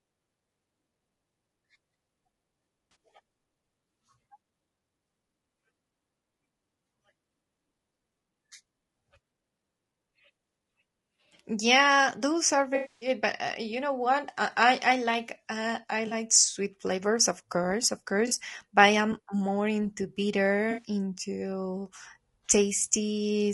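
Throughout the speech, voices sound rough and grainy, with noise between harmonics and a thin, synthetic top band. That points to low-delay AAC compression, likely AAC-ELD at a low bitrate around 32 kbps. Its short frames resolve pitch poorly.

AAC frame loss with concealment then hits at 2.91 s, 16.07 s and 18.27 s, each about 40 ms, and at 20.71 s, about 60 ms. The decoder patches the gaps from the last good spectrum, giving brief smeared, phasey blips. The gap from 12.75 to 13.09 s is longer. There the sound decays toward silence and fades back.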